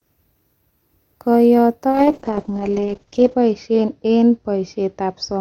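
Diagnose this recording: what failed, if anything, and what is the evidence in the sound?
A call bitrate drop in the codec stage, driven by the network's bandwidth estimate, begins at 1.91 s and lasts to the end of the speech at 5.41 s. The band limit falls from 20 kHz to 8 kHz, muffling the top end, and the coding turns coarse and watery, which fits the encoder falling from about 64 kbps to 7 kbps and staying lowest for 1.44 s. Unlike packet loss, the degradation is continuous, with no gaps or repeated fragments.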